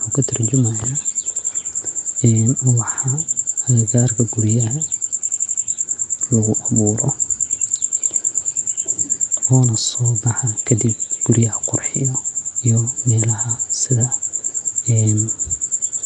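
Nellymoser compression, heard for the whole clip: the speech has a rough, hissy haze and a smeared, underwater quality, with nothing above about 10.6 kHz. This plainly audible damage is likely from the Nellymoser Asao codec, whose fixed low bit budget leaves weak bands filled with noise.

Repeated buffer, from 5.29 to 5.63 s, just after "ubaha agagarka guriyaha": one 85 ms slice plays five times in a row with a hard join at each restart, a short stutter. New audio came late, so playback looped its last buffer, which fits a 4096-sample buffer, without skipping any audio.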